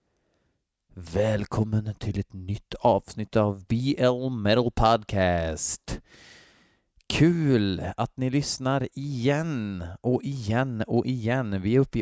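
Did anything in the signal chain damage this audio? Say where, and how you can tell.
No, nothing in the signal chain has audibly damaged this speech recording at any stage.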